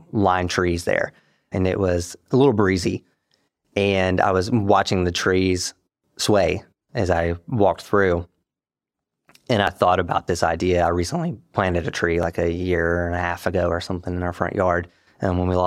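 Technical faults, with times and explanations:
9.67 s and 12.23 s, dropped buffer (overrun): at each point the speech jumps forward with no gap, losing around 10 ms at the first and a few milliseconds at the second. The likely cause is samples overwritten before being read, so the surrounding audio is spliced together.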